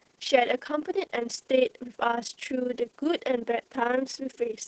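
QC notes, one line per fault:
Throughout: overlap-add ripple. The level pulses up and down by about 11 dB roughly 30 times a second, giving the speech a fast, rough tremolo. Windowed frames were rejoined with an overlap whose gains don't sum evenly, so loudness dips once per frame. On a waveform the envelope shows a regular scalloped pattern; a spectrogram shows evenly spaced vertical bands of alternating brightness across all frequencies.
Throughout: Opus voice compression. The speech is muffled, hoarse and slightly synthetic, with heavy coding damage. It fits Opus in its SILK linear-prediction mode at a low rate near 10 kbps, working in wideband. That caps content at 8 kHz, and the excitation is coded coarsely, smearing breathiness and harmonics. A spectrogram shows a hard ceiling at 8 kHz with nothing above, blurred, patchy harmonics below it, and texture that changes in steps consistent with 20 ms frames.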